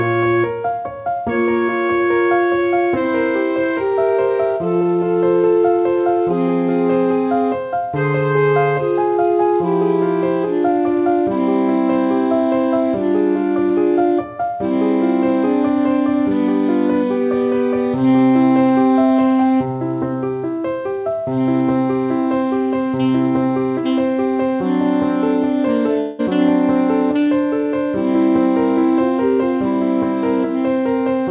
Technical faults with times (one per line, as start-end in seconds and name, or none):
26.00-26.27 long network dropout